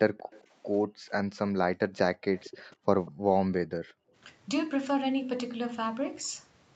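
A speech recording with two kinds of call-path fault. Echo leak appears at 0.17–0.44 s, 2.38–2.64 s and briefly at 3.06–3.11 s: a faint copy of the voice trails the original by 192 ms, roughly 20 to 25 dB below it. The fixed delay sets it apart from room reverberation, which would smear continuously rather than repeat at one offset. The likely cause is a loudspeaker on the far end whose echo canceller let some of its microphone pickup through. Background gated by the echo canceller follows at 0.87–1.1 s, 2.76–2.87 s, 3.11–3.24 s and 3.79–4.13 s, where the room tone drops by about 35 to 40 dB for a tenth to a third of a second and then returns. Only the background ducks and the signal stays intact, unlike a packet-loss dropout that cuts the speech itself. The audio is band-limited at 8 kHz by the Opus call path.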